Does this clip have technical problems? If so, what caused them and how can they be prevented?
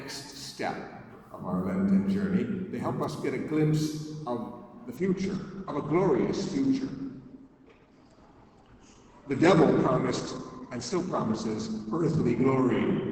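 Yes. At 4.97 s the adaptive stream switched to a lower bitrate, probably because the connection slowed, and it stays there to the end at 13.12 s. The sound points to a drop from roughly 64 kbit/s to about 12 kbit/s Opus. The change is sudden, with no gap: everything above 8.8 kHz disappears, and codec artefacts rise for the rest of the clip. A steadier connection, a larger playback buffer, or locking the player to the higher-bitrate version would prevent it.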